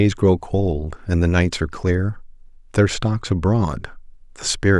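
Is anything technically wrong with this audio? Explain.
No, nothing technically wrong turns up anywhere in this recording.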